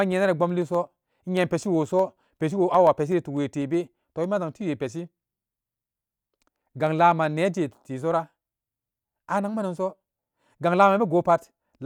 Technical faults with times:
0.12-8.24 periodic USB or driver dropouts

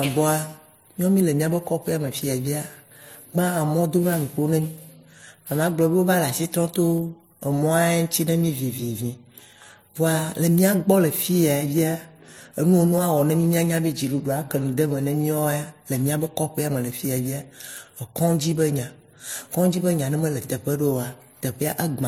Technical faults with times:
0.00-22.07 transcoding between lossy codecs
0.39-21.99 clock drift buffer slips

